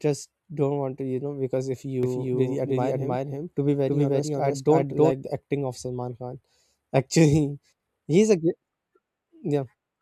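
From 2.03 s, just after "you know because if", to 5.11 s, before "the acting of", a doubled audio track appears: a second, equally loud copy trails roughly 300 ms behind, likely from a slower duplicate capture path. Unlike an echo, it has no decay or room colour, and it starts and stops abruptly.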